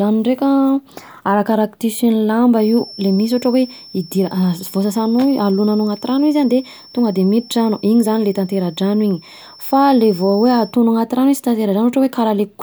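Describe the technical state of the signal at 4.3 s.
At 4.3 s the speech carries a feedback whistle, running from 2.53 s to 10.78 s: a thin, steady 5.4 kHz tone sitting roughly 25 dB under the voice and swelling and fading slowly in level. It is likely a loudspeaker-to-microphone loop held just short of runaway, sustaining one frequency. A spectrogram shows a narrow horizontal line at 5.4 kHz across that span; the waveform barely reveals it beneath the speech.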